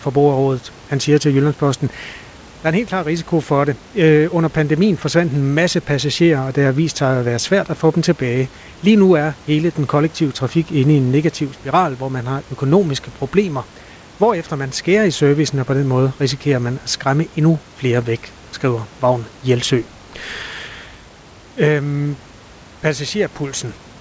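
Speech with no technical faults: room noise sits about 24 dB below the speech, and nothing is heard above 8 kHz, which fits a wideband call codec such as G.722.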